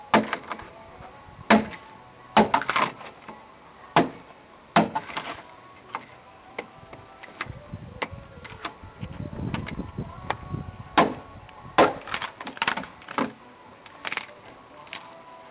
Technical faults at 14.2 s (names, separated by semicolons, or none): gain pumping